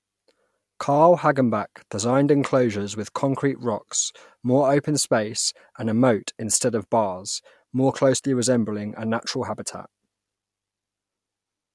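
Listening to the recording of speech, nothing stood out as a technical fault at any point.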